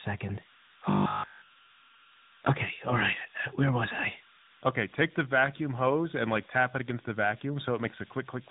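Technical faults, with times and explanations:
Throughout: converter idle tones. A tone around 1.5 kHz, about 23 dB below the speech, sits in pauses and turns grainy under quiet passages. An undithered delta-sigma converter is cycling through repeating bit patterns. Unlike mains hum, the pitch is high and not tied to 50 or 60 Hz harmonics.
Throughout: tandem speech coding. Nothing is heard above 3.8 kHz, and the speech is rough, muffled and warbly. That points to two speech coders in a row, a CVSD-style link and then an AMR-NB stage near 10.2 kbit/s, each recoding the previous one's damaged output. A single codec would not stack distortion this way.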